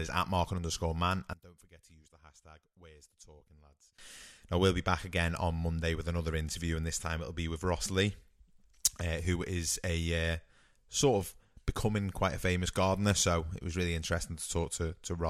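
Speech, with a fault right after "underscore man": from 1.33 to 3.98 s the sound falls about 23 dB, likely one channel inverted so the centred content cancels in mono. The waveform shows a sharply shrunken stretch there.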